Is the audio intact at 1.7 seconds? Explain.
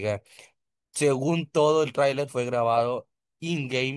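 Yes, the speech at 1.7 seconds plays through cleanly, with no dropout, click, distortion or other fault at that moment.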